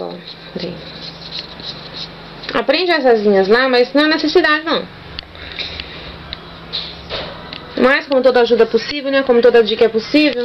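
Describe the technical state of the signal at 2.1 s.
The signal is intact at 2.1 s, with no fault audible at that moment.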